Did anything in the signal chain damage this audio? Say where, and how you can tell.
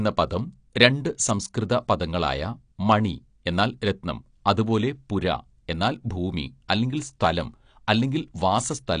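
Yes, at the codec stage: the speech was likely squeezed through AAC compression at a low bitrate, which fits roughly 32 kbps. Throughout, nothing survives above 9.8 kHz, so the sound is dull and smeared, with plainly audible warbling and fizz on sibilants where bands were coarsely quantised.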